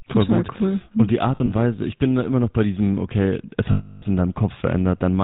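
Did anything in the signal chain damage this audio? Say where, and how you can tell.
Yes. The codec stage damaged it: the whole clip carries the GSM full-rate codec's buzzy, gravelly roughness, consistent with the 13 kbps full-rate coder. The coder models the vocal tract and drives it with a sparse, regularly spaced pulse excitation, so fine detail turns to grit. On a spectrogram the energy stops dead at 4 kHz, and voiced harmonics look smeared and noisy rather than cleanly striated.

The network or radio link added lost GSM frames at two points. From 1.36 to 1.53 s, about 80 ms goes missing, scattered over 160 ms in short gaps of a few tens of milliseconds. Each one is bridged by repeating the last good frame's settings, which gives a brief metallic ring. After "bei diesem okay es", from 3.72 to 4.03 s, about 300 ms is lost. The held sound is a rough, metallic ring. A spectrogram shows frozen, flat horizontal bands.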